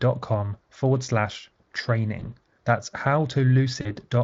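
At 2.19 s the speech breaks up briefly. This is VoIP packet loss concealed by the speech codec. About 20 ms of audio went missing, which fits a single lost frame. The decoder filled it by extending its last pitch and filter, so the sound smears into a fading buzz or coloured noise until 2.26 s. A longer gap follows at 3.81 s, about 40 ms, likely two frames. The speech stays weak or distorted until 3.95 s. Light Speex coloring runs throughout.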